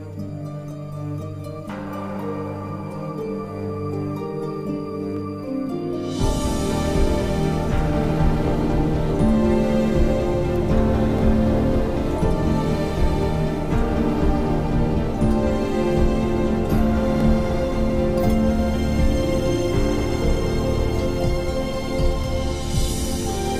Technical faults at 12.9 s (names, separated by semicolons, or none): none